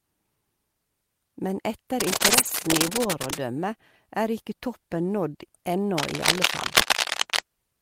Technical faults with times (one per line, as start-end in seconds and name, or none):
2.00-3.40 cable scratch noise
2.11-2.49 lost packet rebuilt from error correction
5.97-7.39 cable scratch noise